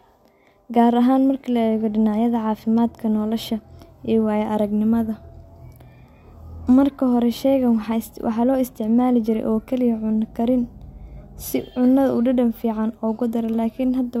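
No technical faults can be heard anywhere in the recording, and the signal stays steady from its first moment to its last.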